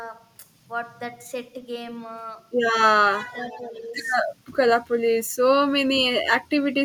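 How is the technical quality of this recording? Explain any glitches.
The recording has two short call-path faults, both within about 0.8 s around the middle of the clip.

From 3.19 to 3.97 s the voice dips sharply, by around 20 dB at its deepest, losing level and some clarity in pieces over roughly three quarters of a second. This is most likely speech suppressed in double talk: with both ends talking at once, the echo canceller could not tell the near talker from loudspeaker echo and attenuated everything, pulling this voice down with it.

Between 3.43 and 3.62 s a faint delayed copy of the speech can be heard, lagging by about 0.68 s and sitting some 25 dB below the main voice. This is likely an echo leak: the far end's loudspeaker output reached its microphone, and its echo canceller let a residue through, which was then sent back down the line as a brief, quiet repeat.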